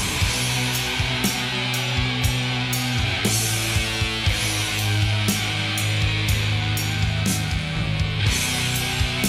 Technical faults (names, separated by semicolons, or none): none